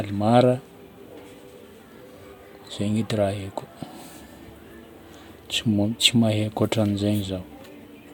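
No technical faults can be heard anywhere in the speech recording, with the signal holding steady and continuous throughout.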